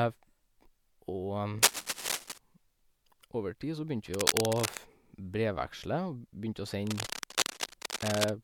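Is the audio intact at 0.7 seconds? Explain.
Yes, the speech is intact at 0.7 seconds, with no audible fault at that point.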